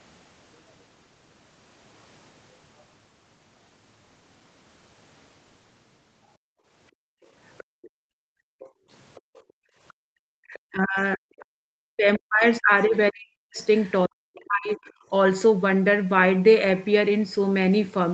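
From 6.38 to 10.13 s the background is gated by the echo canceller: while the far end plays through the loudspeaker, the canceller pulls the microphone down by as much as about 40 dB, so the room tone drops out for roughly three seconds in total before recovering. A second, 40 ms dip of the same depth follows at 11.53 to 11.57 s.

Starting at 7.22 s and running to 11.45 s, a faint second voice sits underneath, about 25 dB below the main speech. This is the other side's voice leaking through, likely loudspeaker echo the canceller failed to remove. It returns briefly at 13.61 to 13.91 s, about 30 dB down, and as a 50 ms scrap at 14.88 s, about 40 dB down.

From 10.41 to 15.11 s the talker's own speech is repeatedly pushed down, by up to about 40 dB, for roughly three seconds altogether. This is speech suppressed in double talk, likely caused by the canceller mistaking simultaneous far-end speech for echo and attenuating everything.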